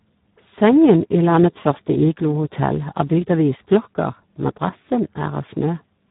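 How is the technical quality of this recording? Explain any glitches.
Pretty rough, honestly. The whole thing runs through the Speex codec, squeezed hard enough that it sounds like around 8 kbps, so excitation gets starved and speech comes out hoarse, buzzy and a bit robotic, with nothing above 3.8 kHz.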